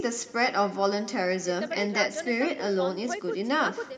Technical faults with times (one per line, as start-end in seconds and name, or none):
0.00-3.98 echo with no canceller